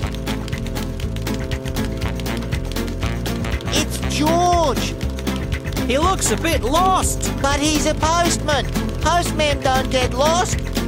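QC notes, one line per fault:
No fault found.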